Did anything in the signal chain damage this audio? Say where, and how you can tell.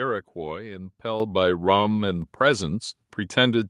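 Yes. At 1.2 s the microphone volume stepped up: call processing raised the device's input gain by about 8 dB in one step. Voice and background noise jump together and stay up, unlike a talker simply speaking louder or a gradual automatic-gain ramp.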